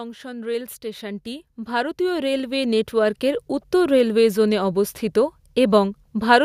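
A speech recording shows automatic gain rising from 0.21 s to 3.52 s, with the level climbing about 14 dB before "উত্তর রেলওয়ে জোনে অবস্থিত". The background noise swells along with the voice, which marks a gain control lifting a quiet input, not a talker growing louder.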